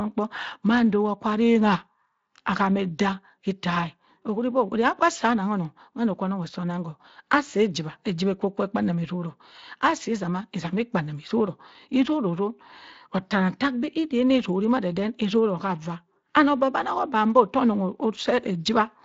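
The speech recording has no technical faults, and the audio stops near 7.6 kHz, which fits a wideband Speex path running at a fairly generous setting and leaving only a light coding character on the sound.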